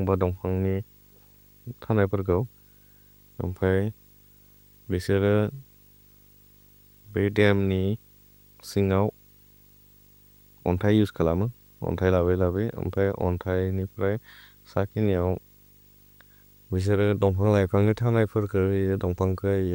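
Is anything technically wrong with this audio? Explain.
Yes, there's video or display buzz running under the whole speech clip: a 50 Hz field-rate buzz with hash, plus a 15.6 kHz line tone, leaking in from a screen or video cable, sitting well below the speech.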